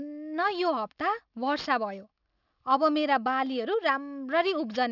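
A speech clip suffering from aliasing throughout: the audio was downsampled without an anti-aliasing filter, and content folding around 6 kHz points to a 12 kHz rate. Sibilants reflect into false, gritty tones sitting roughly 25 dB below the signal, and the spectrum runs hard up to the band edge.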